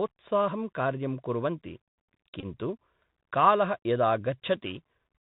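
Bluetooth CVSD headset codec, throughout the clip: the speech carries plainly audible damage from the narrowband headset codec, which fits a 64 kbit/s CVSD link. Each sample is coded as a single up-or-down bit with an adapting step size, so nothing above 4 kHz survives. Loud, bright moments outpace the step and break up, s sounds come through scratchy, and a fine granular hiss sits under the speech.

Bluetooth headset packet repeated, 2.40 to 2.45 s: voice packets between headset and phone were lost, and the decoder replayed the last packet's bits in their place. About 22.5 ms went missing, which fits roughly six packets. Because the same short packet repeats every 3.75 ms through that stretch, the gap turns into a brief, steady buzz near 267 Hz rather than silence, ending as soon as good packets resume.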